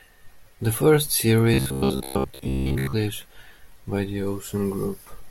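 From 1.54 to 2.93 s the speech goes robotic, with a stiff metallic buzz at about 66.8 Hz. That's robotic sound from repeated short buffers, likely caused by late audio being padded by looping roughly 15 ms chunks for most of that stretch.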